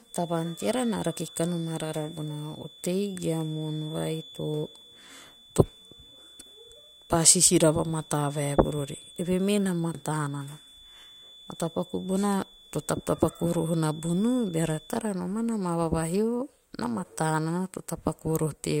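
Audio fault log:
0.0–15.05 s: feedback whistle. A thin 3.5 kHz tone at one pitch, slowly swelling and fading, sits about 25 dB below the speech. A loudspeaker-to-microphone loop, likely held just short of runaway, sustains it.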